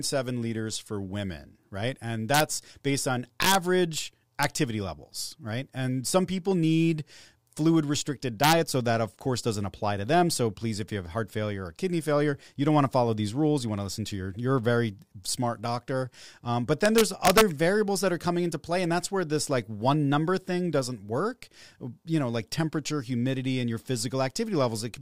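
Integer overflow cracks the speech at 2.34 to 2.40 s, just before "based on". It returns at 3.42 to 3.55 s and at 4.43 s. It strikes again at 8.44 to 8.53 s, after "people need fluid restricted", and at 16.86 to 17.41 s, before "variables that are coming". Loud peaks, driven up to about 4 dB past the integer limit, wrapped to the opposite sign instead of being held. Each wrap flips across the full range. It sounds like a violent crack, much sharper than clipping.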